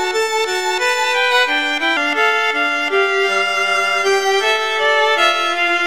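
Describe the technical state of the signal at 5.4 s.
At 5.4 s the audio sits inside a section at the wrong speed, running from 1.97 s to the end at 0.885 times normal, likely from playback on a mismatched clock. Pitch drops about two semitones and timing slows together, unlike a pure pitch shift.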